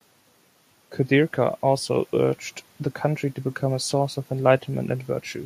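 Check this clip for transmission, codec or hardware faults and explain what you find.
Nothing here points to a transmission, codec or hardware problem; the speech comes across steady and intact all the way through.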